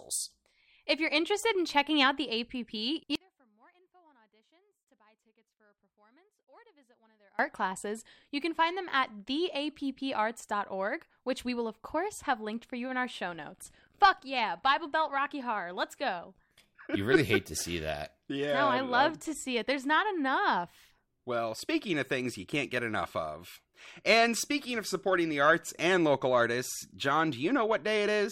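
From 3.15 to 7.39 s the speech hits an audio dropout to a faint residue, likely a lost signal on a still-live path, then snaps back at "classes you can find".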